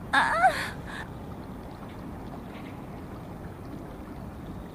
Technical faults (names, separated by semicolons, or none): none